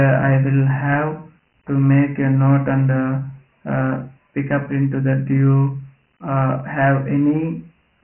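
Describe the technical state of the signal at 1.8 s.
At 1.8 s the speech sits inside a Dialogic VOX ADPCM coding fault that runs through the whole clip. The coder stores each sample as a 4-bit step relative to an adaptive prediction, and the bandwidth, which stops near 3.1 kHz, points to a 6,000-sample-per-second rate, roughly 24 kbps. The result is heavy damage: a dull, telephone-narrow tone with a gritty hiss riding on the speech, rising and falling with it.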